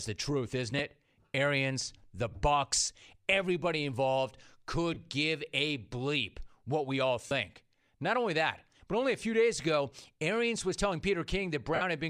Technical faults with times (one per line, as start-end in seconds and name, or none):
0.78 lost LE Audio frames
2.32 lost LE Audio frames
4.94-4.97 lost LE Audio frames
7.27-7.31 lost LE Audio frames
10.02 lost LE Audio frames
11.75-11.82 lost LE Audio frames